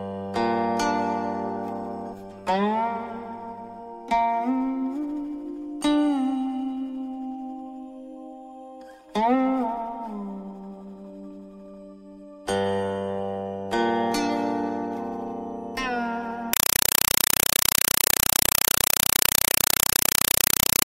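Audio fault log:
16.53–20.86 s, compressed stream played as audio: the sound turns into very loud, chattering static, with 4 ms noise bursts repeating 31.25 times a second. This points to an undecoded Dolby Digital stream read as ordinary samples, with each frame's data followed by zero padding.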